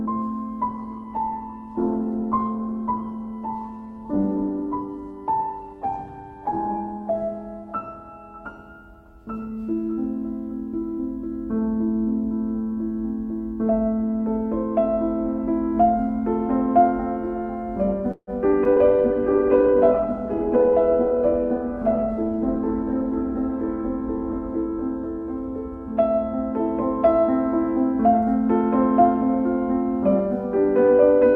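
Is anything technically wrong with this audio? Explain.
Yes. The audio has two call bitrate drops, an audio freeze, two short concealed packet losses, a skip ahead and a jitter buffer speed-up, with most of the trouble clustered around 18 to 21 seconds.

From 0.6 to 8.65 s, a call bitrate drop cut the encoder from 48 kbps to 12 kbps, staying at the bottom for about 6 seconds. Coarser coding and a bandwidth narrowed from 20 kHz to 12 kHz make the sound rougher and duller until the bitrate recovers.

From 18.11 to 18.30 s comes a call audio freeze, likely caused by delayed packets leaving the jitter buffer empty. The receiver stretched the last sound for about 158 ms, including about 50 ms of near-silence. Then playback resumed with nothing lost, only a gap inserted.

At 18.51 to 18.55 s and 18.64 to 18.68 s, short concealed packet losses each dropped 40 ms. The decoder extrapolated from the preceding sound and blended back, leaving brief smears or wobbles where the real audio should be.

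From 18.73 to 18.79 s, a skip ahead discarded roughly 70 ms of audio while later packets were already queued. Playback jumps forward, joining the two sides almost directly, so a small fragment of sound is simply missing.

A second call bitrate drop runs from 18.74 to 26.65 s, falling from 48 kbps to 11 kbps, with about 4.7 seconds at the lowest rate. The bandwidth again narrows to 12 kHz, so the sound turns muffled and grainy.

From 20.56 to 20.78 s, a jitter buffer speed-up trimmed excess buffered delay by cutting out short pitch-period slices, about 50 ms in total. The audio runs at roughly 118% speed without a pitch change, sounding briefly hurried.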